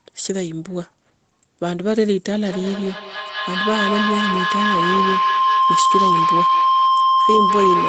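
From 2.4 s to the end, a sustained tone around 1 kHz rises over the speech, peaking at about 3 dB above the speech level. This is feedback howl. The microphone picks up a loudspeaker on the same call, and each trip around that loop adds level. Repeats every 200 ms or so grow instead of fading and narrow to the frequency the loop favours. The howl persists because the loop is never broken.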